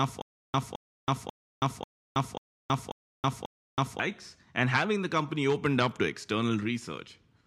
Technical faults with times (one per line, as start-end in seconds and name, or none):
0.00-4.00 stutter with silent gaps